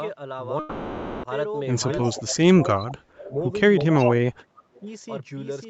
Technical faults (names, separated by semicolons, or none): doubled audio track; long network dropout; echo leak; speech suppressed in double talk